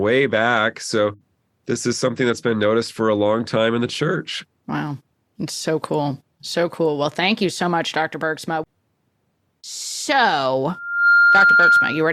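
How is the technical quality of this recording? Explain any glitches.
The recording has one clear fault near the end. From 10.70 s to the close, a 1.4 kHz loudspeaker feedback squeal swells within about 0.4 s to roughly 10 dB above the speech. The microphone is picking up its own loudspeaker and the loop keeps re-amplifying it until that tone runs away.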